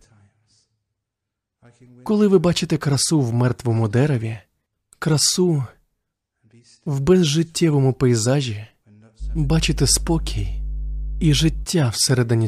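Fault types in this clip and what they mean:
Mains hum: power-line leakage heard as a steady 50 Hz tone, fairly loud under the speech from 9.19 to 11.67 s, pitched and constant, unlike broadband rumble.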